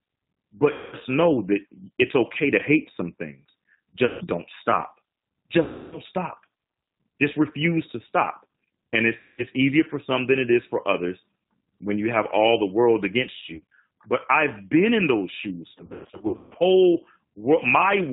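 Throughout, the speech has been carried by the G.729 codec at 8 kbit/s, which discards the original waveform and rebuilds each 10 ms frame from a vocal tract filter, a pitch predictor and a few pulses. Nothing above 4 kHz survives, so the sound is muffled, and the damage is plainly audible as a rough, slightly synthetic quality.

On top of this come stretches of VoIP packet loss concealed by the speech codec. The decoder fills each gap by repeating its last pitch and filter at falling gain, so the sound smears into a fading buzzy tone or coloured noise. This happens at 0.72 to 0.96 s (about 200 ms lost), 4.05 to 4.25 s (160 ms), 5.64 to 5.99 s (280 ms), and 9.18 to 9.44 s (200 ms), just before "easier for some than". After "have all the world", at 13.38 to 13.64 s, the losses are short and scattered, with 120 ms missing over 240 ms and no run longer than 40 ms. The worst is after "been in those shoes", at 15.75 to 16.57 s, where 520 ms is lost across 800 ms and one run lasts 160 ms. 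Because each frame builds on the one before, the sound stays weak and distorted for a while after the losses end.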